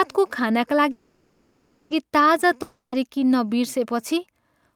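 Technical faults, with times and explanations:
0.91–1.93 s, call audio freeze: the sound stops moving and the last instant is held as a fading buzz for about 1 s, with no silence before the audio resumes exactly where it halted. Nothing is lost, but everything after arrives about 1 s later, the likely result of delayed packets emptying the jitter buffer. On a spectrogram the final spectrum smears into flat horizontal bands that dim gradually. On the waveform a repetitive, shrinking envelope replaces the normal speech shape.
2.62–2.95 s, long network dropout: a short smeared buzz continues the last sound and decays, and the final 90 ms or so is silent. When the audio returns, about 0.3 s of it is simply gone. The likely cause is a run of packets that never arrived, so the receiver padded the hole instead of waiting for them. A spectrogram shows static bands fading into a blank strip. The waveform tapers to flat, then the speech restarts abruptly mid-stream.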